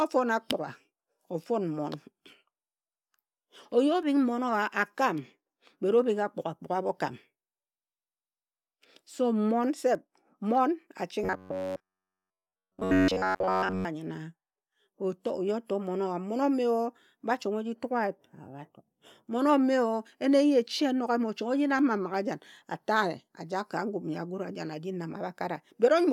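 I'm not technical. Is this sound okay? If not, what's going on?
No. Between 11.24 and 13.85 s the speech turns into a flat, metallic drone, which is robotic sound from repeated short buffers. The likely cause is audio arriving too slowly, so playback loops a tiny slice over and over, giving a steady 94 Hz buzz.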